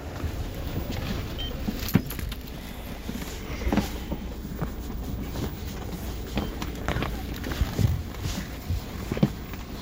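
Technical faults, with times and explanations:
No technical faults are audible anywhere in this clip.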